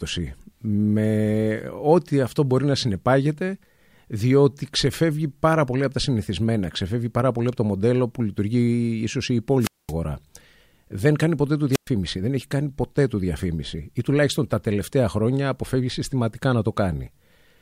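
At 9.60 s, just after "ίσως η", a short burst of hiss rises and then the speech drops into near silence for about 220 ms before returning at 9.93 s. At 11.71 s, after "κάνει ποτέ του", the same hiss-then-hole pattern recurs, muting for about 115 ms until "δεν έχει κάνει ποτέ" resumes at 11.89 s. Both are wireless microphone squelch dropouts: the analogue FM radio signal faded, and the receiver's squelch shut the output off until reception recovered.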